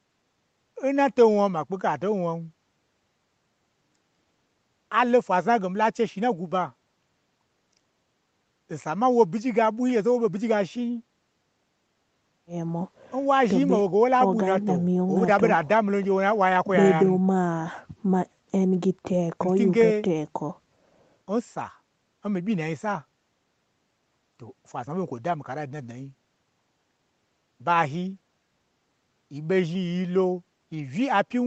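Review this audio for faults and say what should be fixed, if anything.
Nothing here needs fixing. The speech has gone through normal call microphone processing and a WebRTC call path, and its content stops at about 8 kHz, which fits an Opus codec running at around 32 kbps.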